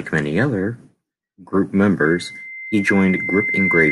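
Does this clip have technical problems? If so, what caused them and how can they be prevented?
Yes. A loudspeaker feedback squeal starts at 2.05 s and runs to the end. The microphone hears its own loudspeaker, and the loop gain passes one at 2.1 kHz. That tone feeds itself, swelling over about a second and a half until it is a few dB louder than the speech. To prevent it, keep the microphone away from and behind the loudspeakers, lower the gain, or notch out 2.1 kHz.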